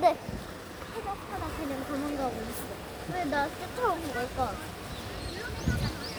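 Nothing stood out as a technical problem on listening to this recording of everyday sounds.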